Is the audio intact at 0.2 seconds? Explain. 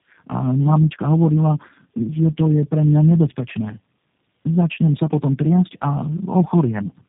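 No. At 0.2 seconds the speech already carries tandem speech coding, which runs through the whole clip. The sound passed through three low-rate speech coders in a row, AMR-NB and then G.729A twice, each re-coding the previous one's errors across G.711 links. Nothing comes through above about 3.7 kHz, and the speech sounds rough, muffled and warbly. Plain band-limiting would only dull the sound, and a single codec would add less of this layered roughness.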